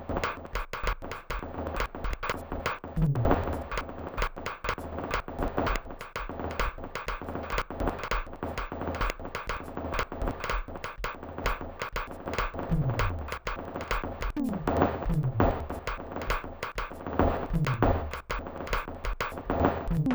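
Music that drops a full octave throughout, doubled and choppy, from interleaved audio read as planar: each roughly 93 ms chunk, fitting a 4096-sample block, splits into half-speed halves. A spectrogram shows harmonics shifted down, with vertical seams repeating at 10.8 Hz.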